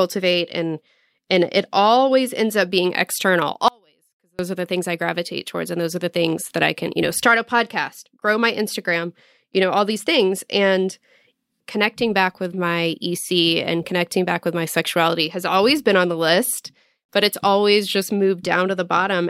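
Speech clip with an audio dropout to a faint residue from 3.68 to 4.39 s, just after "ends up being external" and before "are the things i". For about 0.71 s the signal cuts abruptly to a faint leak roughly 35 dB down, likely a momentary break in the signal chain while the downstream path stayed live.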